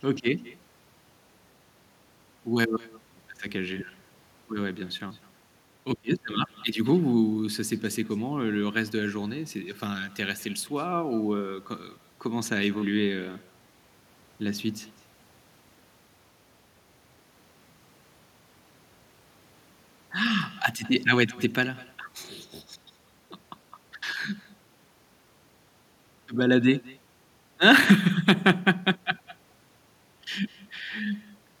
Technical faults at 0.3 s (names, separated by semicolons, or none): echo with no canceller